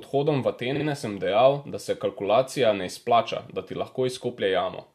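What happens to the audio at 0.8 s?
At 0.8 s the speech stutters. Repeated frames run from 0.745 to 0.838 s: a block of about 46.4 ms of compressed audio, which fits two codec frames, was played again twice. The decoder output the same fragment in quick succession, so the sound jumps back and replays. The repeats add about 93 ms to the audio.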